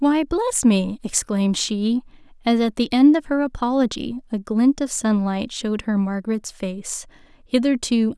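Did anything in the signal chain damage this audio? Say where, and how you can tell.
No, nothing along the chain seems to have damaged this speech recording, and there's no point where the sound breaks or gets bent out of shape.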